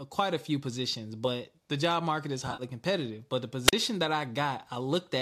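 At 2.47 to 2.63 s, right after "the job market is", AAC frame loss with concealment breaks the speech. About 80 ms of audio went missing, scattered across roughly 120 ms, which fits eight 10 ms frames, with the longest unbroken gap around 50 ms. The decoder patched each hole from the last good spectrum, so the voice turns smeared and noisy. On a spectrogram, the harmonic lines blur into flat, grainy smudges. In the waveform, the envelope goes soft and irregular.

At 3.67 to 3.73 s comes a wireless microphone squelch dropout. The FM radio link faded far enough that the receiver's squelch muted the output for about 40 ms. It is heard as a brief lift of hiss followed by a hole of near silence before the voice returns. The waveform shows a flat, nearly zero gap. On a spectrogram, a thin band of broadband hiss sits just before a dark vertical strip across all frequencies. The light graininess running through the whole clip is likely from low-delay AAC coding.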